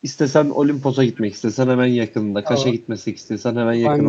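Echo leak appears at 0.41 to 0.93 s, 1.13 to 1.55 s and 3.02 to 3.28 s in this speech clip: a faint copy of the talker returns 480 ms late, very low in the first and last stretches and noticeably stronger, around 25 dB under the speech, in the second. The likely cause is a far end playing the call over a loudspeaker, with its echo canceller letting part of the microphone pickup slip back down the line. Speech suppressed in double talk occurs at 2.42 to 2.57 s, where the voice sinks by about 15 dB for roughly 150 ms, and again at 3.82 to 3.88 s, a shorter dip of about 10 dB. Here the echo canceller likely could not tell the local talker apart from loudspeaker echo while both sides overlapped, so it turned everything down. The Opus call path is audible as a band limit around 8 kHz.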